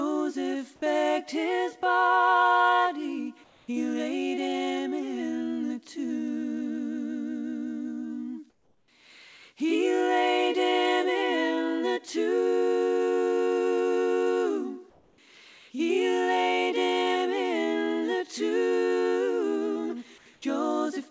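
At 3.44 to 3.68 s, 8.50 to 8.88 s, 14.90 to 15.18 s, 20.18 to 20.26 s and 20.34 to 20.42 s, the background turns into a flat, featureless hiss, in all but the last about 2 to 7 dB quieter. This is comfort noise in place of the background. It is likely caused by the sender stopping transmission in quiet gaps while the receiver fills them with synthetic noise. Throughout the clip, nothing is heard above 8 kHz.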